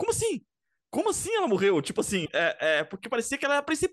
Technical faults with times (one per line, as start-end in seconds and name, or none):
2.25-2.29 broken MP3 bit reservoir